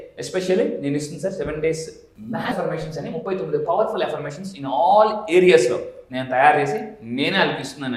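At 2.51 to 2.53 s the audio jumps forward with no gap. About 0.4 s is missing, a skip ahead where a stretch of audio was dropped while later audio was already waiting. From 2.65 to 5.60 s a jitter buffer speed-up trims short pitch-period pieces. The sound runs about 107% fast at unchanged pitch, shedding roughly a fifth of a second of delay.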